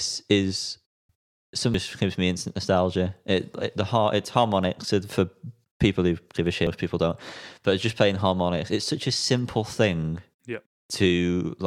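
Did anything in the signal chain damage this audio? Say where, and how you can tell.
Yes: damaged data in a compressed stream, at the codec or storage stage. Events at 1.74 s and 6.67 s mark frames the decoder misread before resyncing. A buffer dropout would leave a silent gap or click, while these come from corrupted compressed frames.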